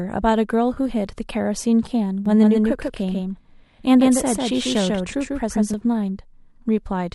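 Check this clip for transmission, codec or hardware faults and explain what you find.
Two faults stand out in the speech: a brief dropout patch near the start and a delayed second copy of the audio running through the middle.

AAC frame loss with concealment, 0.74 to 0.77 s. About 20 ms of coded audio went missing, which fits two lost frames of the roughly 10 ms size used by the low-delay AAC this stream is likely carried in. The decoder covered the gap by reusing the last good spectrum rather than leaving silence. Because the gap is so short, there is no fade to quiet, just a smeared, noisy or phasey blip.

Doubled audio track, 2.26 to 5.74 s. A second full-band copy of the speech sits about 150 ms behind the original and roughly 5 dB quieter. It has no reverberant tail or room colouring, so it sounds like a clean, detached repeat rather than an echo. It switches on and off abruptly at those two points. 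The likely cause is the same signal being captured a second time through a slower path and mixed back in.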